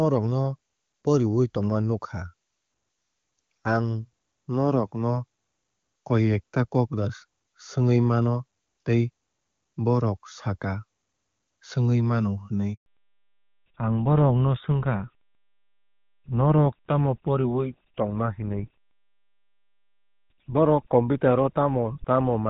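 At 12.74 s a handover gap cuts the speech for 120 ms, until 12.86 s. The call was moved between networks and no speech frames arrived during the switch, so the sound dies away abruptly into silence and the audio carried in that interval is lost.

From 12.86 s to the end, a fallback to narrowband removes everything above 4 kHz. The wideband coding heard earlier, consistent with HD Voice at a high rate such as 23.85 kbit/s, gives way to a duller, rougher sound that fits GSM full rate at 13 kbit/s.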